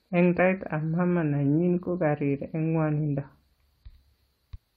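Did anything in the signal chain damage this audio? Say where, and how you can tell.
Yes, the codec stage. There's damaged data in the compressed stream, heard as two brief glitches cutting into the speech: one at 0.38 s and another from 4.54 to 4.56 s, each only about 20 ms long. That sound fits corrupted bytes in the encoded file. The decoder hits frames it can't parse properly, spits out a garbled fragment, then resyncs at the next valid frame header, so the damage stays short and self-contained.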